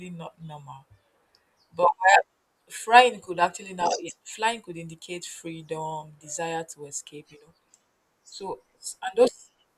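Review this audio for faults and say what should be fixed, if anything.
Nothing in this speech recording needs fixing. No technical fault can be heard anywhere in it, so there is nothing to prevent.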